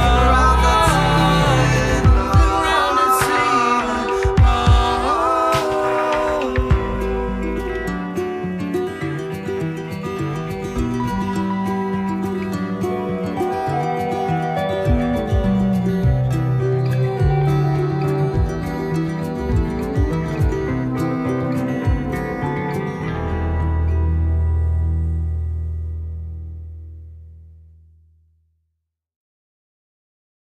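No technical faults are audible.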